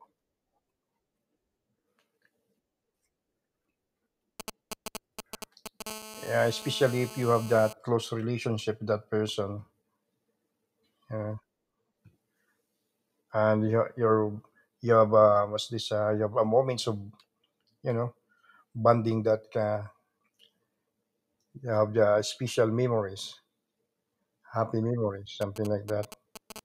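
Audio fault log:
4.40–5.82 s, GSM signalling bursts: a galloping dit-dit-dit of short buzzes, roughly 10 dB below the speech. A nearby 2G phone is sending brief groups of radio bursts while it signals to the network, and the audio circuitry rectifies each group into short 217 Hz buzzes.
5.87–7.73 s, GSM phone buzz: a continuous hard, raspy 217 Hz buzz about 17 dB below the speech, ending just before "close relationship with that". The phone is now transmitting steadily as in a call, and each of its 217 bursts per second is demodulated into a sharp pulse, which is why the buzz has so many harmonics and bears no relation to the speech.
25.41–26.52 s, GSM signalling bursts: the same galloping dit-dit-dit of brief 217 Hz buzzes returns just after "happy memories", roughly 15 dB below the speech, from another round of signalling bursts.
26.56–26.60 s, GSM phone buzz: a very short snatch of steady 217 Hz buzz, about 14 dB below the speech, as the phone briefly switches to continuous call-mode transmission.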